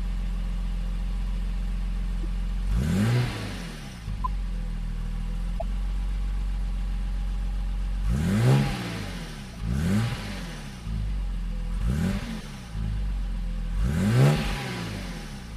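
The audio has four short chirps and blips from a corrupt frame being decoded, at 2.23 s, 4.24–4.27 s, 5.59–5.62 s and 12.40–12.44 s. Damaged compressed data misplaces energy across a few frames. On a spectrogram these show as brief, out-of-place vertical streaks, loudest near 5.6 s.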